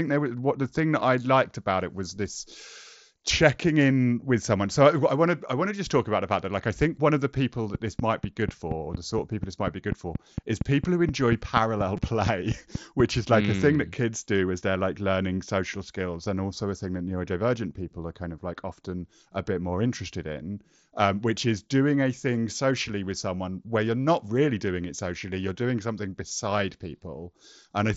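It's a speech recording, and starting right after "one of the people" at 7.75 s there's a train of clicks running until 13.01 s, just before "is like mm a". They tick along at a steady 4.2 per second, about twenty of them, poking up around 15 dB above the speech. Likely interference from nearby gear or a faulty connection. At 11.97 s there's also a brief concealed Bluetooth headset packet loss: about 15 ms went missing, which fits two dropped frames, and the receiver papered over it by repeating the last stretch of waveform, so it sits tucked among the clicks. Underneath it all you can hear the Bluetooth mSBC headset codec: speech tops out at 8 kHz, with a faint grain on louder bits.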